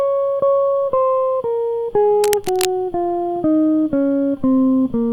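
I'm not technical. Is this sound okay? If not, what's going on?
No. From 2.24 to 2.65 s, a rough scratching noise covers the music. That is cable scratch noise, likely from a worn cable or plug being moved.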